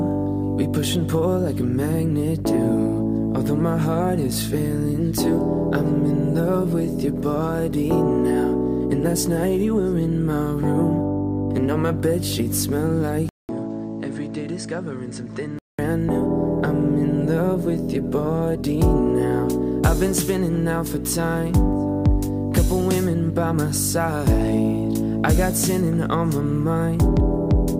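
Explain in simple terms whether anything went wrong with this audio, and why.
At 13.29 seconds the sound drops out for about a fifth of a second, then comes back duller, noticeably quieter and with a faint new background noise, until 15.79 seconds. This is likely an input switched to a poorer device, one that loses the crisp top end above 8.9 kHz.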